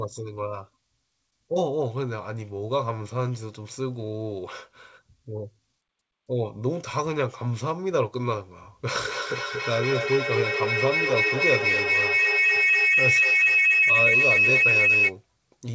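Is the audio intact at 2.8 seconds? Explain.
Yes, the speech at 2.8 seconds is intact, passing through the WebRTC call path with its normal G.722 coding and nothing above 8 kHz.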